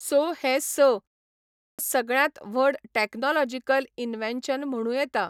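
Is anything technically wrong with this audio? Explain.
Yes. At 1.58 s, after a pause of about 0.59 s, there is a clipped start after a pause. The output went idle in the silence and took roughly 0.21 s to resume. The next sound begins abruptly, missing its onset until 1.79 s. Muted pauses differ because they lose only background, never the sound itself.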